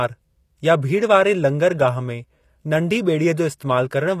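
Throughout, likely HE-AAC compression near 24 kbps rebuilds the treble from copied lower bands, so s sounds turn gritty and metallic, with nothing above 14.9 kHz.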